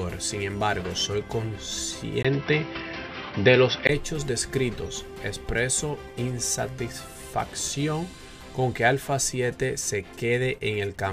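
From 2.23 s to 3.89 s, after a 20 ms gap, the sound turns dull with nothing above 5.8 kHz, shifts level by around 5 dB and gains new background noise. Likely an input switched to a poorer device; the gap and new noise rule out plain filtering.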